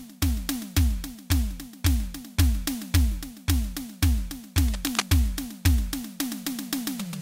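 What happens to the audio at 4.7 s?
A burst of cable scratch noise runs from 4.62 to 5.02 s over the music, dense and uneven, only slightly quieter than the signal. It is likely a worn cable or connector shifting, making its contact resistance jump.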